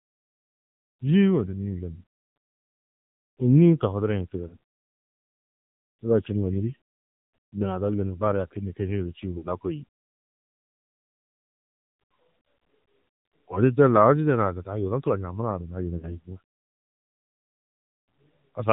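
The whole recording passes through the AMR narrowband mobile codec. Nothing above 4 kHz survives. The speech sounds plainly buzzy and synthetic. That fits a low mode near 7.4 kbps, where few pulses are left to model each stretch of voice.

Lost AMR speech frames then break the sound three times. The first comes at 4.48 to 4.57 s and fits a single 20 ms frame. The next two, at 9.38 to 9.48 s and 15.98 to 16.16 s, fit about 40 ms each. In each case the decoder repeats the last good settings at falling gain. The result is a short warbling dip before the speech returns rough.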